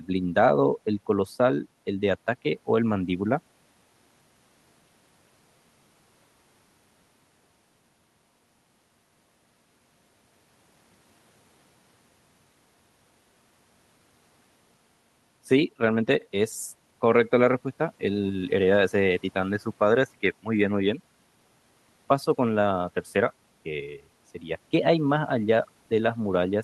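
Nothing in this recording trips the ear as a technical fault at any point; there's simply nothing here that calls for a timestamp or an explanation.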